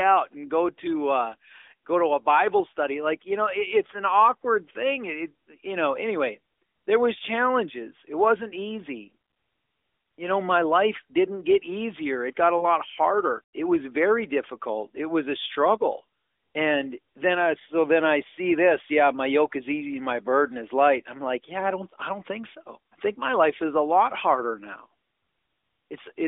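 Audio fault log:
12.58–12.65 s, lost AMR speech frame: Just after "got a", the sound briefly dips and warbles. One 20 ms frame failed its checksum. The decoder filled the gap by repeating the last good pitch and vocal tract settings at reduced gain. It then recovered with a short weak, rough onset. This narrowband mobile channel passes nothing above 4 kHz, and its clean, lightly coloured tone fits the 12.2 kbps mode.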